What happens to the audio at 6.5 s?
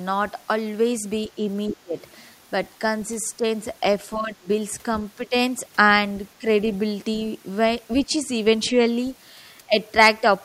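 Speech suppressed in double talk, from 6.39 to 6.47 s: the speech briefly dips by roughly 15 dB. This is likely an echo canceller that, with both sides talking at once, mistook the near talker for loudspeaker echo and pulled the level down.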